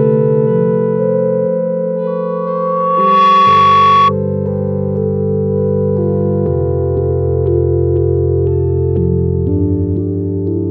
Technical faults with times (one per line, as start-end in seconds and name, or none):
2.07-4.13 loudspeaker feedback squeal